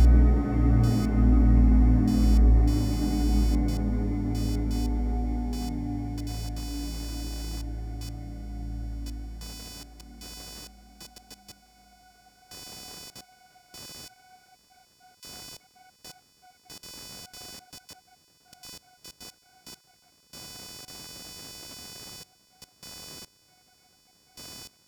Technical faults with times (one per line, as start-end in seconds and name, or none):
0.00-24.87 computer activity noise